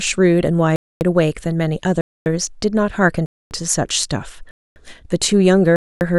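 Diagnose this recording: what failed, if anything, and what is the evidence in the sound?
Gap between chunks, at the playback or buffering stage: 250 ms holes at 0.76, 2.01, 3.26, 4.51 and 5.76 s follow each 1 s chunk. Each chunk likely starts late but no sound is lost. A spectrogram shows full-band blank columns, and the waveform drops flat with hard edges.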